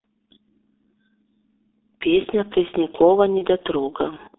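Throughout, the speech carries heavy G.723.1 codec damage: a roughly 300 Hz to 3.7 kHz line band at about 6.3 kbit/s, sounding muffled and hoarse with smeared consonants. From 3.38 to 3.46 s, VoIP packet loss concealed by the speech codec replaces one missing 30 ms frame with a fading extrapolation, and the voice stays weakened briefly afterwards.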